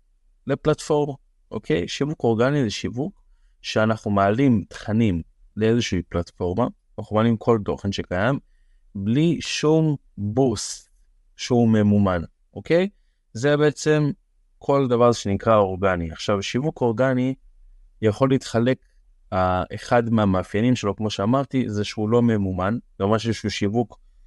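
From start to end the speech carries plainly audible codec damage, most likely from Bluetooth LC3 compression, the transform codec of LE Audio. The audio is cut into very short frames, and the way the damage sits in time fits 7.5 ms frames at around 48 kbps. Too few bits are left for the spectrum, so the upper band is coarsely coded. Unlike the longer-frame smearing of MP3 or AAC, the artefacts stay tight around each sound rather than spreading before onsets.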